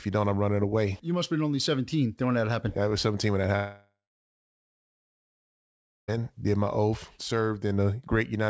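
From 3.56 to 6.11 s, a fading buzz or hiss replaces the speech, leaving about 2.1 s of silence before the speech resumes, likely from a long network dropout.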